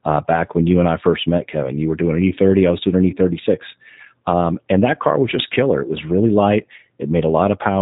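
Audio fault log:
Throughout: G.729 codec. The speech is plainly rough and synthetic. This fits G.729A at 8 kbit/s. The codec does not store the waveform. It rebuilds each 10 ms frame from a vocal tract filter, a pitch predictor and a few pulses. Detail between those pulses is lost, which gives the roughness. Nothing above 4 kHz survives, so sibilants sound dull and the whole clip has a narrow, telephone-like band.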